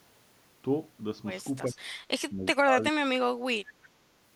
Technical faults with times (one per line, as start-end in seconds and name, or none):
1.66-1.83 speech suppressed in double talk
1.74-1.78 echo leak
2.31-4.00 speech suppressed in double talk